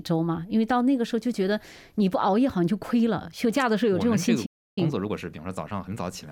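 The audio cuts out from 4.45 to 4.78 s, a playback stall of about 0.31 s, likely from the player running out of data or its thread being blocked, seen as a flat gap. From 4.78 to 6.02 s, time-compressed catch-up runs it 1.25 times fast at normal pitch: spectrogram events crowd closer together while frequency bands stay put.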